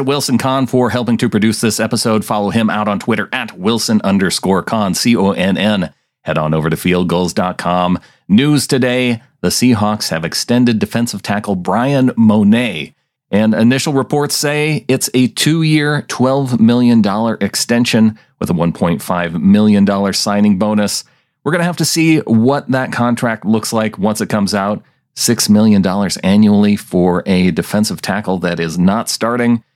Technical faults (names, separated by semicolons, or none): none